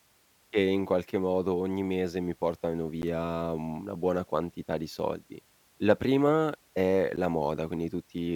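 At 3.02 s, between "ogni mese mi portano" and "una buona quantità di", the speech drops into a block of digital silence about 11.6 ms long. The length fits a 512-sample buffer that was likely not filled in time, so zeros went out instead. The signal stops and restarts with no fade, which leaves a tick. The same fault recurs at 7.16 s, just after "prima è", with the same length and click.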